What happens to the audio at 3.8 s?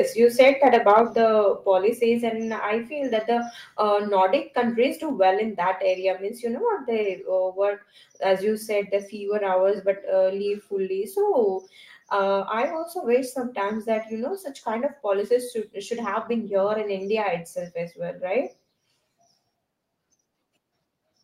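At 3.8 s the speech carries on intact, with no dropout, click, distortion or other fault at that point.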